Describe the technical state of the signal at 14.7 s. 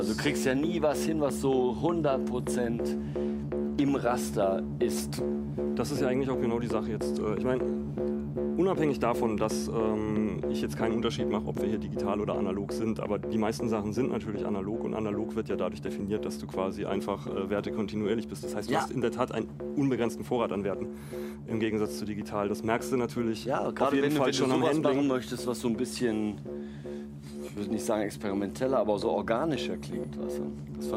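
At 14.7 s the signal is intact, with no dropout, distortion or other technical fault at that moment.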